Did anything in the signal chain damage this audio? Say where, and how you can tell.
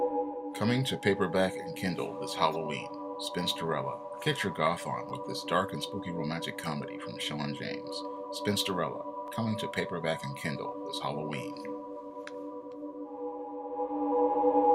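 Yes. Two brief clicks at 5.09 s and 9.27 s, each a tiny stutter where a sliver of sound plays twice with a hard join. This is a repeated buffer at the driver and buffer stage: new audio wasn't delivered in time, so the device replayed its last block once more. The doubled piece lasts about 10 ms, which fits a 10 ms buffer, and roughly 10 ms of real audio is lost at each point.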